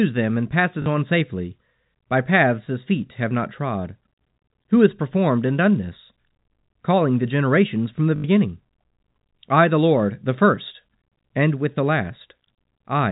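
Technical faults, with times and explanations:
0.82 to 0.86 s and 8.16 to 8.24 s, packet loss with last packet repeated: the same short slice of speech replays for 40 ms, then 80 ms. The roughly 50 Hz buzz points to 20 ms packets. Unlike a dropout, the stutter fills the gap with sound.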